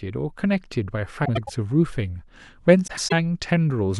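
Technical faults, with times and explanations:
1.25–1.50 s and 2.87–3.13 s, frames out of order: each stretch of speech turns into a brief garbled flutter. In each quarter-second span, two neighbouring blocks of roughly 0.1 s were decoded in swapped order, which fits two runs of about four frames each. The halves play back to front, and the three joins break the waveform's continuity. No time is lost.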